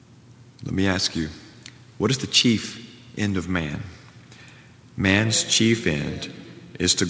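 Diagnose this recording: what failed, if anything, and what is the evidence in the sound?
Nothing failed: the audio came over a call path whose content stops at 8 kHz, which fits a G.722 wideband link at 64 kbps, and no stage shows a defect.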